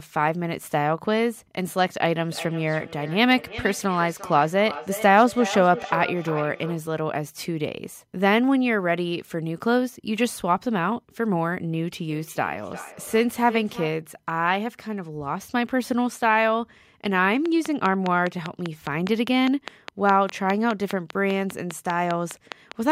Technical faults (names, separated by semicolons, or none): feedback echo between two devices; train of clicks